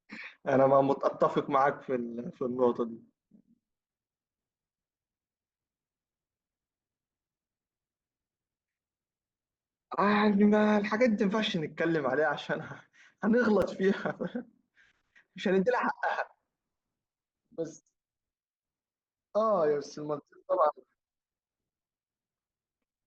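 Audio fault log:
13.62 s, block of digital silence: a sharp tick as the speech cuts to silence for 5.3 ms with no fade, which fits an unfilled 256-sample buffer.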